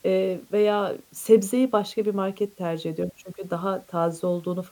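Low bit depth with dither runs through the whole speech clip: the samples are held to about 9 bits, with dither added before rounding, so the quantisation error becomes an even white hiss, roughly 35 dB below the speech, steady and free of distortion.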